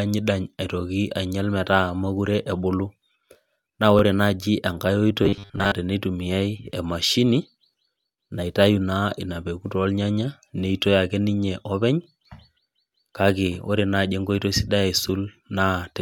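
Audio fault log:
3.99–4.01 s and 12.04–12.06 s, overlapping chunks: the audio was handled in 4-second chunks, and at these joins each new chunk began about 23 ms before the previous one finished. That short stretch plays twice, heard as a brief stutter or click.
5.23–5.74 s, robotic sound from repeated short buffers: fresh audio likely stopped arriving in time, so playback looped the last 10 ms over and over while most of the real signal was dropped. The looping imposes a fixed 100 Hz buzz, giving a rigid metallic tone.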